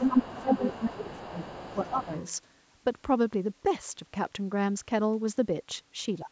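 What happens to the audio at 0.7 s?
An echo canceller likely failed to remove the far end from the microphone, so the other side's voice is leaking through from 0 to 2.37 s, only slightly quieter than the talker. Both sides are also talking at once here, which likely made the canceller turn everything down, so the speech is suppressed in double talk between 0.09 and 1.35 s, dipping by up to roughly 15 dB in pieces.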